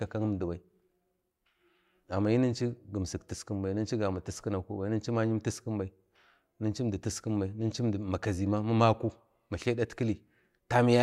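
No technical faults are audible.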